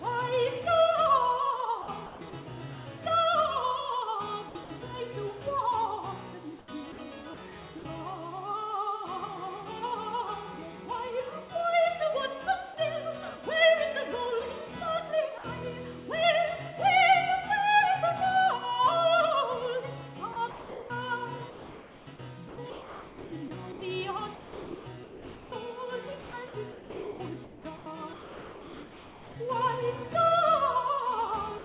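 The audio sounds choppy from 1.82 to 2.33 s, 4.49 to 4.7 s and, at length, 20.33 to 29.36 s. This is sound chopped by the voice detector, likely from a sender repeatedly gating its transmission and substituting comfort noise. From 6.59 to 6.98 s the real background gives way to a flat, featureless hiss, likely comfort noise in place of the background generated during a transmission pause. Brief gaps of about 60 ms at 6.92 to 6.98 s, 7.79 to 7.85 s, 15.38 to 15.44 s and 31.58 to 31.64 s swap sound for steady noise. This is sound dropped by the voice detector, likely because quiet material was mistaken for background. The call path itself carries nothing above 4 kHz, which fits narrowband G.711-style telephony.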